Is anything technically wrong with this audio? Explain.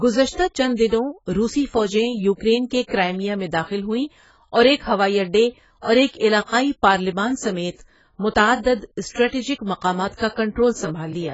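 Yes. The speech was likely squeezed through heavy AAC compression, most plausibly AAC-LC at a very low bitrate around 16 kbps. Throughout the clip, the encoder had too few bits, so it dropped all content above 7.7 kHz and quantised the remaining frequency bands coarsely, leaving gaps. As a result, the speech sounds dull and smeared, sibilants turn fizzy, and sustained sounds take on a warbling, watery texture.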